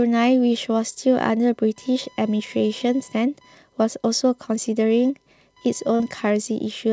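The speech carries computer activity noise from start to finish. It is a faint buzz, pulsing at around 1 kHz and sitting roughly 35 dB below the speech. Activity in the processor, graphics card or mouse is disturbing the ground that the audio circuit shares with the computer. The buzz follows the machine's workload, not the talking. It stays present through pauses. The second fault is a short concealed packet loss from 5.96 to 6.02 s. About 40 ms of audio failed to arrive in time. The receiver covered roughly 36 ms of the gap by stretching out the last sound, then blended back into the real signal. The result is a brief smear or wobble near the end of the clip. Any short consonant falling in that gap may be lost. The call path itself stops at 8 kHz, which fits a G.722 codec.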